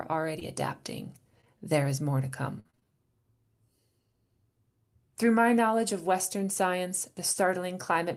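Short concealed packet loss, 0.39 to 0.43 s: about 20 ms of audio never arrived in time, so the receiver extended the preceding sound and then blended back into the real signal. It is heard as a brief smear. Within it, from 0.41 to 0.43 s, a lost packet was rebuilt from error correction: the following packet carried a low-bitrate copy of the missing 20 ms, which the decoder played instead of leaving a gap, so that frame comes out rougher and noisier.

Short concealed packet loss occurs twice in a row at 1.41 to 1.45 s and 1.45 to 1.48 s, each patching a 20 ms hole with continued sound.

Repeated packet loss (robotic sound) runs from 2.60 to 2.85 s, just after "is more to". Five separate gaps totalling 140 ms, the longest 50 ms, were each concealed before the next began, covering 58% of the stretch. The result is choppy, robotic sound with pieces missing.

Short concealed packet loss returns at 7.33 to 7.37 s. 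Inside it, from 7.35 to 7.37 s, one lost packet was again rebuilt from error correction, giving another 20 ms of rougher, noisier audio instead of a gap.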